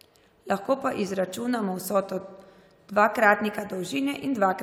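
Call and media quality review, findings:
No faults found in this speech recording.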